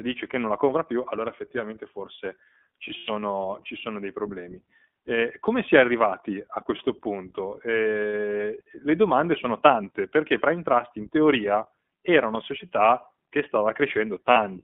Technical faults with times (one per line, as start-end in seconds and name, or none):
0.00-14.63 iLBC codec
2.88-3.10 lost iLBC frames
14.31-14.38 lost iLBC frames